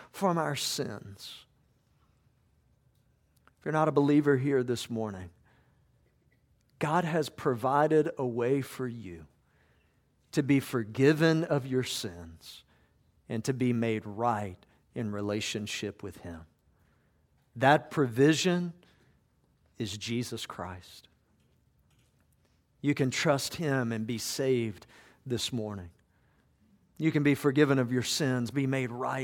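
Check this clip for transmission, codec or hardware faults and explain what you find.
No transmission, codec or hardware faults turn up in this speech clip.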